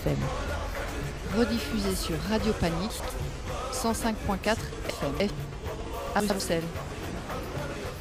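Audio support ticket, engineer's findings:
Chunks out of order at 2.9–3.1 s, 4.9–5.3 s, 6.2–6.4 s: jumbled moments. 100 ms blocks played late by one, three, one positions. Probable jitter buffer/reorder stage. Waveform: hard steps at joins. Spectrogram: vertical broadband lines, misplaced segments.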